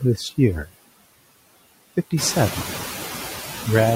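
Noise suppressor artifacts run through the whole speech clip. The suppressor judges which frequency bands hold steady background noise and turns them down frame by frame, by about 18 dB here. The noise therefore drops away in the pauses and swells back up beneath each stretch of speech, pumping in step with it. This becomes more exposed after the room noise rises by about 10 dB at around 2 s, to only about 11 dB below the speech.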